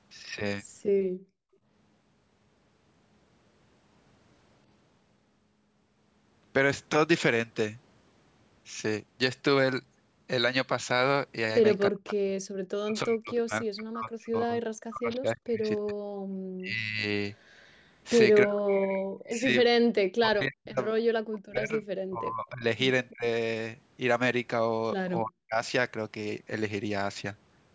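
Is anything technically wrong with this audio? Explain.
Yes. This speech clip carries clear echo-canceller faults.

Background gated by the echo canceller appears from 1.09 to 1.67 s and again briefly at 16.26 s. The canceller clamped the microphone while the loudspeaker played. The room tone drops out, by about 34 dB in the first case and about 40 dB in the second, then returns when the gate releases. The first dip lasts about half a second. The second is a short blink.

Speech suppressed in double talk occurs at 11.9 to 15.98 s, 16.58 to 17.05 s, 18.44 to 19.5 s, 20.21 to 23.25 s and 25.23 to 25.57 s. The talker's sound is pushed down hard, by up to about 40 dB. The longest stretch loses around three seconds in total. The likely cause is both sides talking at once. The canceller cannot tell the local talker from the loudspeaker echo, so it suppresses both.

Echo leak shows from 17.38 to 17.91 s. 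A faint delayed copy of the speech arrives 314 ms behind it, at about 35 dB below the main level. It likely comes from a loudspeaker on one side whose canceller failed to remove all the pickup, so a delayed copy was sent back.

The call microphone processing removes the lowest bass. Nothing is present above 8 kHz.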